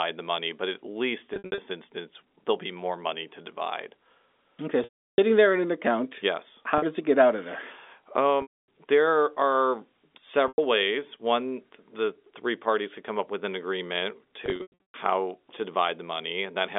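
Packet loss with pitch repetition breaks up the speech at 1.34, 4.84, 6.78, 8.42, 10.48 and 14.46 s. Each gap gets patched by looping the last pitch period. The short one at 6.78 s, 40 ms, comes across as a brief buzzy hold. Longer ones fade toward silence before the speech cross-fades back in: 340 ms at 4.84 s, and 360 ms spread over about half a second after "up with an agreement".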